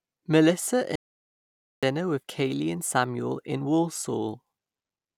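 Speech runs normally until 0.96 s, when an audio dropout to silence cuts it off mid-flow; nothing returns until 1.83 s, so roughly 0.87 s of speech is simply missing. The gap holds no room tone at all, which likely means the input was lost while the recorder kept writing silence. On a waveform it appears as a flat line, and on a spectrogram as a blank vertical band with hard edges.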